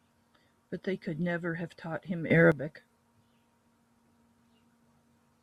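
A sudden gain jump runs from 2.30 s to 2.52 s: the speech abruptly becomes about 12 dB louder, and the background noise rises by the same amount at the same instant, so the whole signal steps up together rather than the talker simply speaking more forcefully. At 2.52 s it drops back just as sharply. The cause is likely a digital gain change applied between one sample and the next with no ramp, such as a level setting or bit shift switched in and then out.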